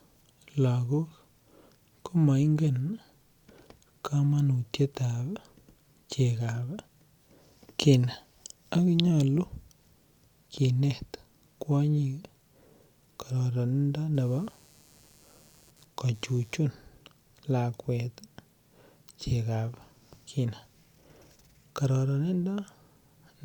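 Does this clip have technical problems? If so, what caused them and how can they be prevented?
Yes. From 13.78 to 16.58 s there is computer activity noise: changing load on the processor or graphics card shifted the ground shared with the audio circuit. This adds a chirping buzz pulsing at around 150 Hz, about 35 dB below the speech, that tracks the computer's activity rather than the talking. It can be prevented by giving the audio interface its own clean power, or by using balanced connections or a ground-loop isolator between the computer and the audio gear.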